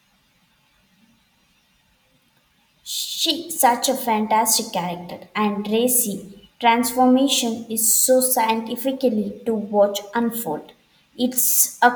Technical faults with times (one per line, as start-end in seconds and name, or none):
none